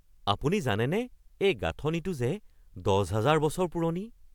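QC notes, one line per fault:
No faults found in the speech. Nothing calls for a note.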